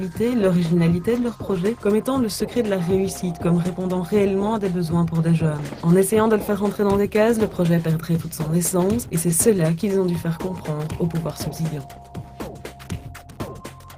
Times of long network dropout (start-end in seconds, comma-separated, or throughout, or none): none